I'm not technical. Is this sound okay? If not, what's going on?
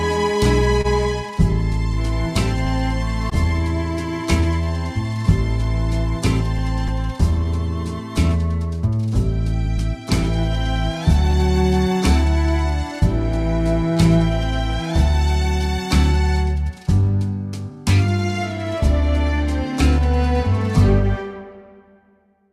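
No. There are small timing problems all through the sound.

The main one is clock drift between sender and receiver. The sending device keeps time slightly slower than the receiving one, about one and a half percent. So the receiver keeps running short of sound to play. It has to make up the gap. This makes small, uneven timing hiccups across the whole clip, not one single glitch.

Twice, near the start, there is a short stall from a late packet. A piece of sound arrived late, so the receiver held the last bit of sound until it came. This happens at 0.81 s, held for 29 milliseconds, and at 3.30 s, held for 15 milliseconds. Nothing is lost. The sound just hangs for a moment and may dip or buzz slightly.

From 1.43 s to 22.01 s there are repeated timing corrections. To keep up with the slow sender, the receiver keeps repeating tiny pieces of sound. Each repeat is small. Together they add roughly a third of a second. 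The effect is a pace that runs about 1% slow and feels slightly unsteady.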